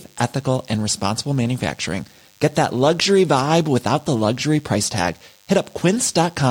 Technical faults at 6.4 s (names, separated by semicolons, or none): DECT cordless phone buzz